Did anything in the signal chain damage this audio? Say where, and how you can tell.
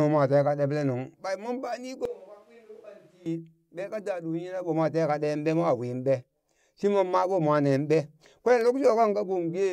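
Yes. From 2.05 to 3.26 s the speech turns roomy and hollow, with thinner bass. It drops roughly 10 dB, and room noise sits about 25 dB below it. Both edges are abrupt. The likely cause is a switch to a distant microphone at capture.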